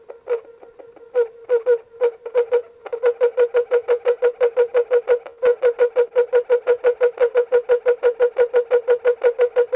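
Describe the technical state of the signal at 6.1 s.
A late packet emptied the jitter buffer, causing a short stall from a late packet at 6.08–6.14 s: the preceding sound is stretched 30 ms, with nothing lost.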